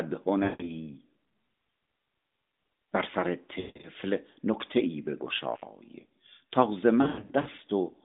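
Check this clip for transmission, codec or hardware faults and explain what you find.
There are three bursts of lost AMR speech frames in this narrowband mobile speech, which carries no audio above about 3.7 kHz.

The bursts fall at 0.44–0.75 s (160 ms lost), 3.60–3.88 s (200 ms scattered, longest run 160 ms) and 7.02–7.48 s (260 ms scattered, longest run 100 ms). Each failed frame makes the decoder repeat the last good pitch and vocal-tract settings at falling gain. The sound smears and fades rather than cutting abruptly to silence like a plain dropout, then returns rough.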